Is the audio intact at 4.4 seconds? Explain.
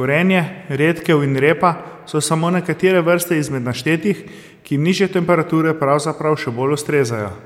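Yes, the speech at 4.4 seconds plays through intact, with no dropout, click, distortion or other fault at that point.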